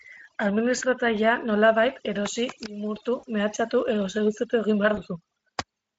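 Overdone noise removal runs throughout this speech. Strong filtering cuts bands near its noise estimate, leaving a twinkling, near-silent background.

VoIP packet loss concealed by the speech codec appears at 0.77–0.83 s, 3.19–3.25 s after "nolabait erosi limurtu", and 4.95–5.02 s after "mehatxatu edo seduzitu egin". The decoder fills gaps of 40, 40 and 20 ms by stretching its last pitch and filter into a fading, buzzy tone or coloured noise. The voice stays weak briefly afterwards.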